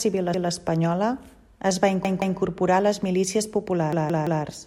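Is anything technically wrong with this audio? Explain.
Yes. The speech has a repeated buffer fault at three points: 0.34 to 0.51 s, 2.05 to 2.39 s and 3.93 to 4.44 s. Each time, fresh audio failed to reach the output in time, so the device replayed its last chunk of about 171 ms, which fits an 8192-sample buffer. It plays one extra time, then twice, then three times, so each stutter is longer than the last, with a hard join at every repeat. No speech seems to be skipped.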